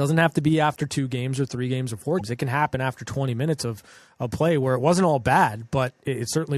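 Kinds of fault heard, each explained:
Damaged data in a compressed stream: corrupted frames make the decoder lose sync, giving a brief glitch right after "or three games or".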